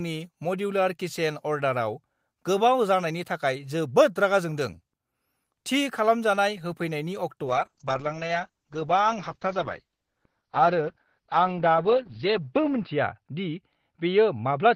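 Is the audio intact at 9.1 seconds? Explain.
No. A call bitrate drop runs from 7.47 s to the end. The encoder's budget falls from 32 to 8 kbps, so it codes coarsely and cuts the bandwidth from 20 kHz to 6 kHz. At 9.1 s the speech sounds muffled and rough.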